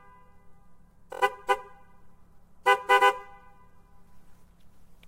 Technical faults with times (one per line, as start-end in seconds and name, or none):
1.12-1.21 repeated frames